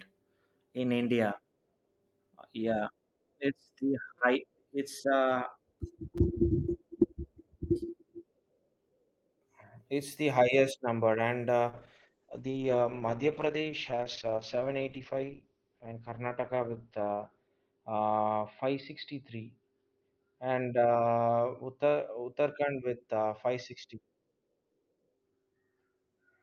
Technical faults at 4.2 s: repeated buffer

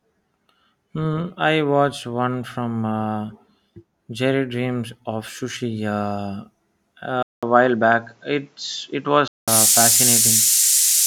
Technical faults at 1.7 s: none

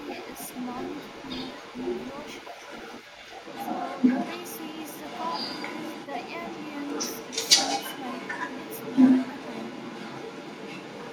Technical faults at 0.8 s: echo leak

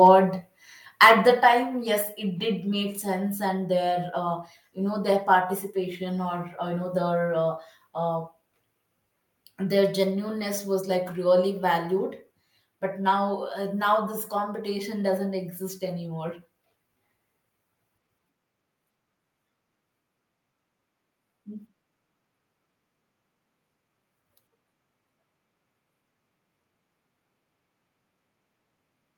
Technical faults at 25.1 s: none

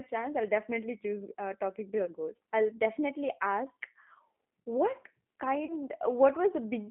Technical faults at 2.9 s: G.729 codec

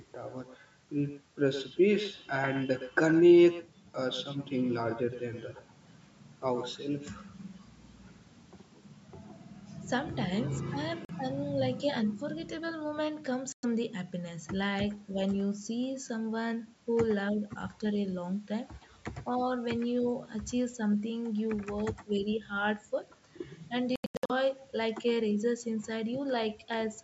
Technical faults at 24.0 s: echo with no canceller; Bluetooth dropout

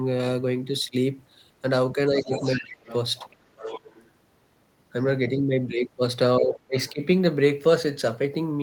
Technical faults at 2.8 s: speech suppressed in double talk; other side's voice leaking through

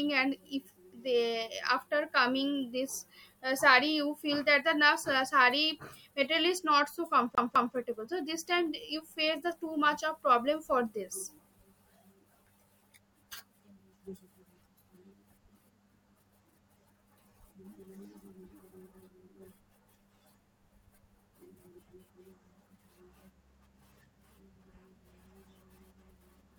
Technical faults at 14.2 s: none

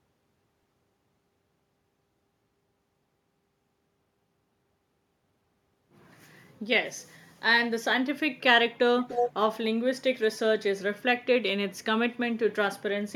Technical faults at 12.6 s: none

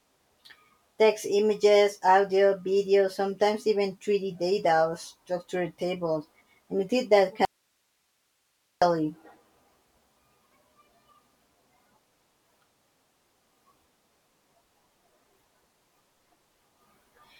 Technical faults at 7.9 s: audio dropout to a faint residue

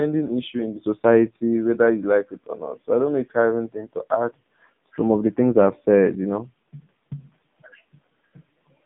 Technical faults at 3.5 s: AMR narrowband mobile codec

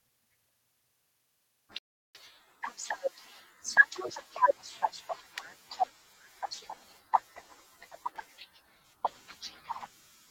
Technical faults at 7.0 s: none

